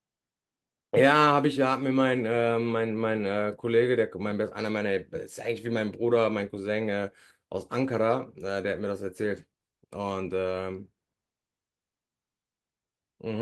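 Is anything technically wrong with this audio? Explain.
No, nothing technically wrong can be heard here.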